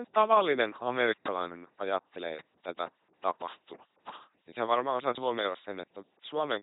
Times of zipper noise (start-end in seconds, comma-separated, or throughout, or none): none